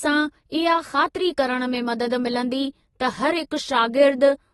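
Throughout, the speech is dull, with nothing above 11.8 kHz and fizzy, smeared sibilants, likely from AAC compression at a low bitrate, which fits about 24 kbps.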